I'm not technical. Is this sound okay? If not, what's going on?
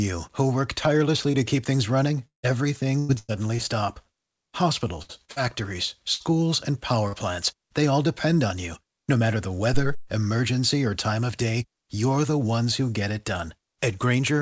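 No. Here is what happened and how it sounds.

Short concealed packet loss: At 1.32 to 1.35 s, 5.25 to 5.30 s and 5.32 to 5.38 s, tiny pieces of the call arrived too late. The receiver covered each hole by stretching the sound just before it, so you hear a brief smear or wobble.

Repeated packet loss (robotic sound): From 2.27 to 3.60 s the connection dropped pieces four times in quick succession, the longest gap about 156 ms. Each patch was followed by another, so this stretch sounds choppy, with bits missing.

Burst of packet loss: At 5.02 to 5.11 s, 6.14 to 6.22 s and 7.08 to 7.15 s, several pieces in a row were lost. The receiver held the last sound and faded it into a brief buzz or hiss, then the audio jumps ahead with a bit missing.

Phantom power thump: From 9.74 to 10.12 s, power to the microphone was switched while it was live. That electrical jolt passed straight into the audio as a deep thump that dies away quickly, most of it within about 85 ms.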